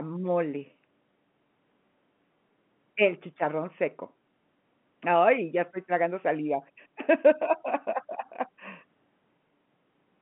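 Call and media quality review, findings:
Speech arrives over G.711 telephone coding working as expected, confined to the normal line band of 150 to 3400 Hz with nothing above 3.8 kHz, and no faults are found.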